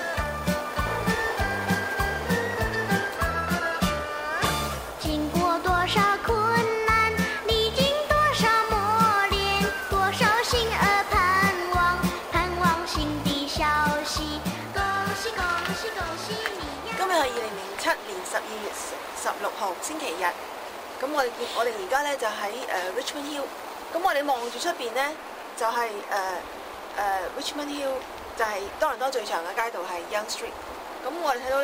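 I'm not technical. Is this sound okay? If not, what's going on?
Yes, this sound is okay. Nothing in it goes wrong at any point, so there's nothing you need to fix.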